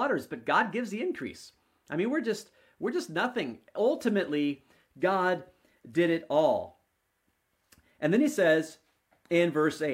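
From about 2.25 s right through to the end of the speech, there's sample clock jitter. The converter's timing wobbles, on the order of a couple of microseconds, so each sample lands a touch early or late. Where the waveform is changing fastest, that timing slip turns into an amplitude error sitting roughly 40 dB under the signal. You hear it as a faint grainy hiss riding on the louder, brighter moments, dropping away in the pauses.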